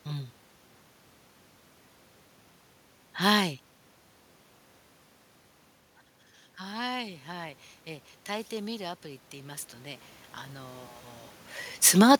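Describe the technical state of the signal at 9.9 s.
At 9.9 s the signal is mid-way through an automatic gain rising, running from 8.51 to 10.99 s: after the input fell by about 14 dB, the gain control slowly added about 6 dB, so speech and room noise swell together, unlike a talker moving closer.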